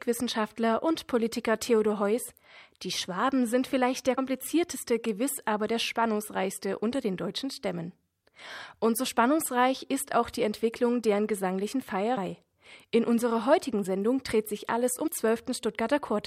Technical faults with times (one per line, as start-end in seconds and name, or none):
4.17 compressed frames skipped
12.16 compressed frames skipped
15.06 compressed frames skipped